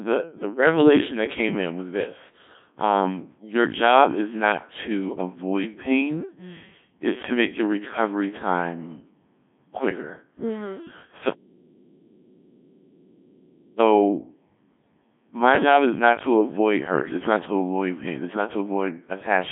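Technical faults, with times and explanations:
Throughout, Codec 2 vocoder: the speech is rebuilt from sine waves driven by pitch, voicing and energy values, so it comes out buzzy and robotic rather than smeared or warbly. Unlike plain narrowband telephone filtering, which keeps the natural waveform inside its 150 Hz to 3.6 kHz band, here the waveform itself is lost and the damage is heavy. Nothing is present above 3.7 kHz, and the coarseness points to the 1.3 kbit/s mode.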